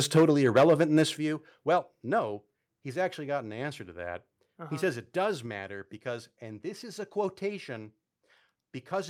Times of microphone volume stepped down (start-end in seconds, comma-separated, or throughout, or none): 0.18, 1.17, 2.19, 5.46